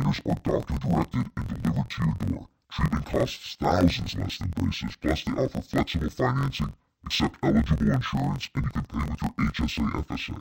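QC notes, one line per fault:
Throughout: interleaved audio read as planar. Each 23.2 ms block, which fits a 1024-sample block, is split into half-speed left and right halves, so the speech sits an octave low, doubled and choppy. The spectrogram shows harmonics halved in spacing and seams every 23 ms.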